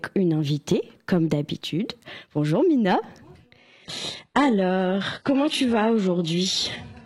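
From 3.58 s to the end, the sound suddenly turns dull and synthetic, with nothing above 11.5 kHz and no gap. This is an adaptive stream at a lower bitrate.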